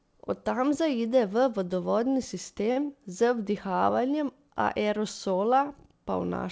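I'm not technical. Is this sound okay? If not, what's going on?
No. At 2.72 to 2.88 s, just after "tam zaide v vodovodni", there's a short stall from a late packet. The speech briefly holds and stretches, but nothing is lost.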